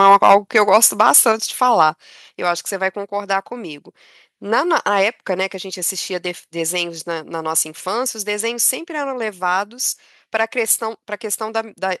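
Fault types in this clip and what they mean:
Microphone overload: For the first 1.2 seconds the loudest syllables are crushed flat at the top and carry a harsh, crackly edge. The input is running about 5 dB hotter than the converter can take, so a few percent of the samples get their peaks sliced off. That's most likely the mic's input volume being set too high, so the preamp is feeding in more signal than the converter's ceiling allows.
Microphone volume stepped down: You can hear the speech and the room tone drop together in sudden steps, at 0.33 s by about 2 dB, then at 1.32 s and 2.34 s by about 3 dB each. The first step lands in the middle of the distorted stretch, and the others follow shortly after it. The likely cause is the call software catching the clipping and pulling the device's input gain down a notch at a time.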